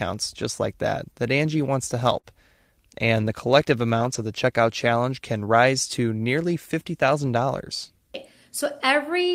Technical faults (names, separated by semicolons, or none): short concealed packet loss; lost packet rebuilt from error correction